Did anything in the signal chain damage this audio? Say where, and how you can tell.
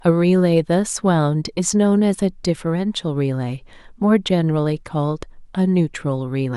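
No, nothing damaged it.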